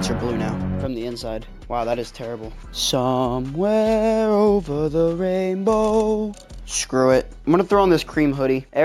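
From start to finish there's imaging from linear upsampling. The sound fits a 16 kHz source stretched to 44.1 kHz by straight-line interpolation, so the top is dulled and a mirrored image sits between 8 and 16 kHz, roughly 30 dB down, giving a faint metallic shimmer.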